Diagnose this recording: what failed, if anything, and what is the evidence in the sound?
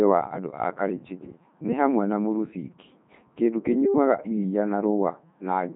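The codec stage failed: Codec 2 vocoder damage runs through the whole clip. The speech sounds robotic and buzzy, with nothing above 3.9 kHz, which fits the 3.2 kbit/s mode. The decoder rebuilds speech from sine waves, so spectrograms show combed harmonics and smeared envelopes.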